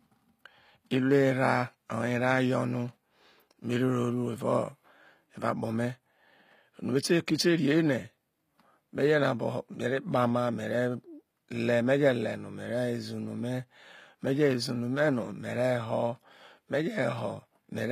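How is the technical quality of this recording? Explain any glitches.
The recording has one fault, present throughout the whole clip. The treble sounds rebuilt rather than captured, and nothing reaches above 15.5 kHz. This is likely HE-AAC compression at a low bitrate, which fits about 24 kbps. Only the lower spectrum is coded, and the top is copied up from it. Those copied harmonics do not line up with the originals. So the sibilants sound gritty and metallic, and the damage is plainly audible.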